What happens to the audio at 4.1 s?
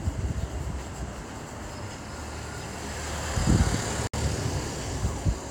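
A gap at a join of encoded pieces opens from 4.07 to 4.14 s. Two separately encoded sections were joined untrimmed, so the encoder's start delay and end-frame padding remain, leaving a 62.5 ms gap with smeared edges before the sound resumes where it stopped.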